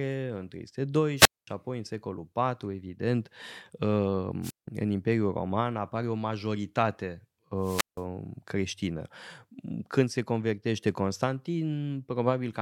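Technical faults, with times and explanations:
1.17–1.47 s, 4.42–4.68 s and 7.60–8.03 s: wireless microphone squelch dropout. Each time the radio link weakens, hiss swells, then the receiver's squelch mutes the output for 0.22 s, 0.17 s and 0.17 s. On a spectrogram, a broadband noise smear precedes a blank, near-silent gap before the speech returns.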